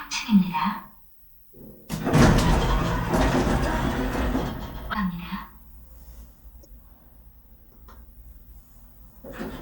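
At 4.93 to 4.96 s and again at 6.62 to 6.65 s, the sound briefly glitches and the audio jumps ahead, each glitch lasting roughly one 26 ms MP3 frame. This is likely a broken MP3 bit reservoir: frames were lost, and the next frame reached back for data it had stored earlier, found bytes belonging to a different frame, and decoded them as garbage.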